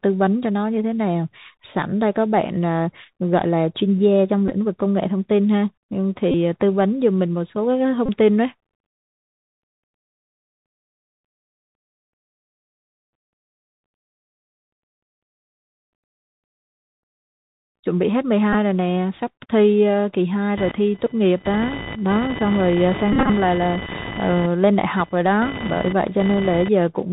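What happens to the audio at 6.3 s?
At 6.32 s a Bluetooth headset packet repeat begins and runs to 6.34 s. Voice packets were lost for 22.5 ms, which fits six 3.75 ms packets. The chip decoded the last good packet's bits again each time. That 3.75 ms repeat gives a brief, steady buzz near 267 Hz.

Under it, and across the whole clip, the Bluetooth CVSD headset codec is plainly audible. Nothing above 4 kHz gets through. Its adaptive one-bit steps give s sounds a scratchy edge and leave a granular hiss under the speech.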